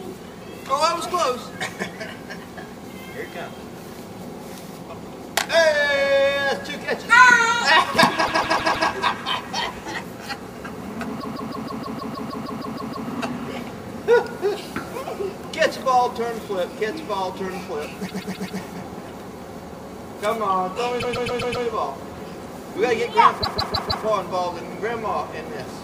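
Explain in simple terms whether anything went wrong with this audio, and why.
Repeated frames make the audio stutter at 8.24–8.87 s, 11.20–13.08 s, 18.07–18.59 s, 20.99–21.64 s and 23.42–24.05 s. Short chunks of about 0.13 to 0.16 s replay several times, and the clip runs about four seconds longer.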